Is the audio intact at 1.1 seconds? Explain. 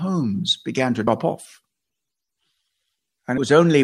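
No. Right after "began to", at 1.07 s, compressed frames were skipped: the decoder never played a short run of frames, so roughly a tenth of a second of speech vanishes, which fits about three 32 ms frames. At the join the speech jumps straight ahead past the missing audio.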